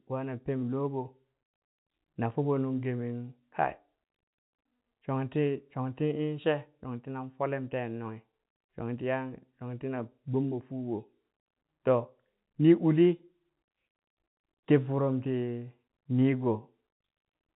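Nothing goes wrong anywhere here, just speech carried over ordinary G.711 telephone coding, with the top end stopping at about 3.8 kHz as telephone audio does.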